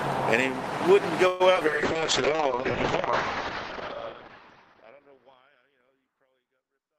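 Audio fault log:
1.27–1.42 s, call audio freeze: the sound stalls and its last moment is stretched into a fading buzz for about 126 ms, with nothing lost. The likely cause is packets held up in transit, letting the jitter buffer run dry until they arrived and playback resumed where it stopped. On a spectrogram the last spectral shape smears into a horizontal band that decays; the waveform shows a tapering, repetitive stretch rather than a dropout to zero.
1.54–1.57 s and 1.61–1.63 s, short concealed packet loss: twice, about 40 ms of audio never reached the decoder in time and is simply gone. Only a sliver was synthesised to bridge the first gap and none the second, so each event sounds like a brief smear or wobble. The receiver also cut its delay by roughly 30 to 40 ms each time. The waveform shows abrupt splices, and the spectrogram shows narrow vertical seams with content jumping across them.
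1.67 s to the end, call bitrate drop: the encoder's rate fell from 32 to 6 kbps, staying at the bottom for about 2.4 s, so the audio turns coarse, watery and muffled. At that rate the coded bandwidth shrinks from 20 kHz to 6 kHz. On a spectrogram everything above 6 kHz is cut off by a sharp horizontal ceiling, and the remaining band looks blotchy and quantised. This carries on through the smooth fade-out near 3 s.
1.93–3.11 s, jitter buffer slow-down: to build up its reserve, the buffer repeated single pitch periods and pause fragments, adding 64 ms in total. Playback runs at about 95% speed with unchanged pitch, so sounds are slightly drawn out. The waveform shows duplicated cycles lengthening sustained segments, and spectrogram harmonics stay level while events spread a little further apart in time.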